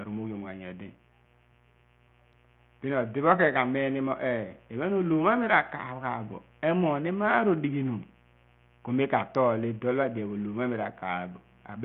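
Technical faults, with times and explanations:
Throughout, mains buzz: a steady, raspy buzz sits under the speech at a low level, roughly 35 dB below it. Its fundamental is 60 Hz, with harmonics running up to several kHz. Those harmonics come from sharp switching spikes, such as from a dimmer or rectifier, leaking in twice per cycle. That edge is what separates it from plain mains hum, which would be a smooth, dull tone near 60 Hz with little energy above it.
Throughout, Bluetooth SBC compression: the treble flickers and drops in and out, and a gritty, granular noise with aliasing rides on the speech. The damage is heavy. The likely cause is the SBC codec at a low bitrate, fitting roughly 48 kbps. With so few bits, the weaker upper sub-bands starve and the rest are coarsely quantised. This is not a simple low-pass cut, because content still reaches 20.7 kHz. The top end is unstable, not absent.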